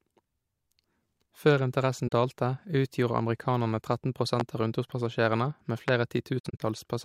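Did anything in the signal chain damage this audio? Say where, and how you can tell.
Yes. At 2.08 to 2.12 s the speech drops into a brief, soft-edged hole of about 43 ms, and at 6.39 to 6.60 s it breaks up into several such gaps, about 149 ms missing in total and the longest run around 70 ms. This is AAC frame loss with muting in the codec stage. The decoder zeroed the missing frames, and the overlapping windows faded the sound out and back in. The first gap fits about two lost frames.

At 4.40 to 4.43 s and again at 5.88 to 5.91 s there is a single sharp loud pop, about 15 dB above the speech, while the speech carries on underneath. Each is a brief impulse added on top of the signal rather than a gap in it. The likely cause is a voltage step or spike in the analogue wiring or a driver glitch, such as a switch, plug contact or static discharge, which the downstream circuitry shaped into a short pop.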